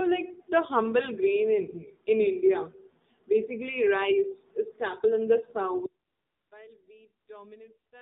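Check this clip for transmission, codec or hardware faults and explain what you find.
Three faults are present: mobile codec coding throughout, a dropout near the end, and two stretches of comfort noise inside that dropout.

AMR narrowband mobile codec, throughout: the speech has passed through AMR-NB. Each 20 ms frame is rebuilt from a vocal-tract model and a few excitation pulses, and nothing above 4 kHz survives. The result is muffled, plainly buzzy and synthetic, which fits one of the lower modes, around 7.4 kbps.

Audio dropout to a faint residue, from 5.86 s to the end: the path likely lost its wanted signal while staying live afterwards. Right after "is staple in the" the speech cuts off abruptly rather than fading. What remains is only a faint sound, about 25 dB below the speech level, continuing until the clip stops.

AMR comfort noise, 6.08 to 6.52 s and 7.26 to 7.28 s: the sender treated these moments as silence and stopped sending speech frames. 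The receiver filled the 440 ms stretch and the brief 20 ms one with synthetic noise built from a coarse level and spectrum. That noise is heard as smooth, steady hiss switching in and out over the faint residue.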